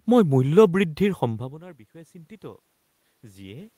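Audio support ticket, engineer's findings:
Automatic gain rising, 0.77 s to end, after "মই মূল্য": input fell about 22 dB, AGC ramped gain up gradually, so speech and room noise swell together.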